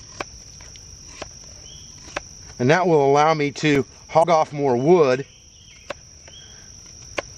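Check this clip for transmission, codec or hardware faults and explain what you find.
Two faults turn up close together near the middle of the clip.

From 3.75 to 4.00 s there is processor overload crackle: the processor misses several buffer deadlines in a row, and each miss becomes a tiny silent gap with hard edges. The gaps fit buffers of roughly 3 ms. The waveform shows a handful of notches, and the spectrogram shows thin vertical broadband lines, heard as gritty crackling.

From 4.19 to 4.25 s there is damaged data in a compressed stream. Corrupted bytes make the decoder misread frames and resynchronise, producing a brief chirp or blip. On the spectrogram it appears as a short smeared blotch with an abrupt discontinuity, and the waveform shows a sudden jump.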